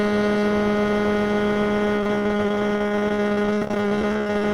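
From about 1.85 s right through to the end, the music breaks up with repeated packet loss, giving that robotic sound. Dozens of short dropouts, the longest around 35 ms, arrive one after another. Each is papered over by stretching the last bit of audio, so roughly 38% of that stretch is patched-in filler. The result is choppy and robotic, with bits of the music missing outright.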